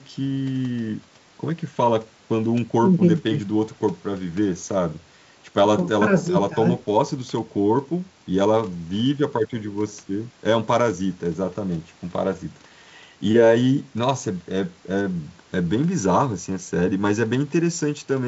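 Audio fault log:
No faults detected.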